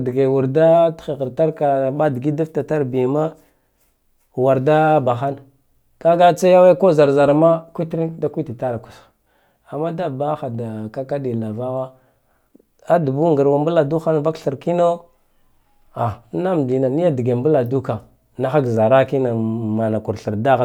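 Nothing goes wrong anywhere in this bit of speech, so there's no technical fault to point out.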